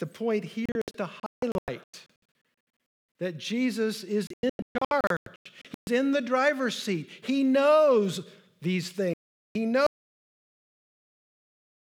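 Speech, broken up by digital broadcast dropouts at three points. From 0.66 to 2.45 s the sound keeps vanishing in short holes, adding up to about 1.18 s of silence; the longest gap is 0.22 s. From 4.27 to 5.88 s the pattern repeats, with about 0.86 s missing and no single hole longer than 0.13 s. From 9.14 to 9.56 s about 0.42 s is lost. The receiver was dropping corrupt frames and muting until clean ones arrived. The hole lengths fit frames of about 32 ms. What was broadcast in those gaps is gone. At 9.87 s there is an audio dropout to silence. The sound cuts out completely and never returns before the end. The gap holds silence, with no room tone at all. The likely cause is a lost input, such as a failed link or a disconnected source, while the recorder kept writing silence.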